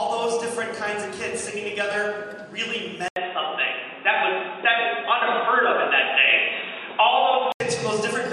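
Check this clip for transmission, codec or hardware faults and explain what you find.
There is one hardware-side fault. From 3.08 to 7.60 s, after an 80 ms gap, the sound turns dull and boxy, with nothing above 3.8 kHz, a level shift of about 5 dB and new faint background noise. This is likely an input switched to a poorer device.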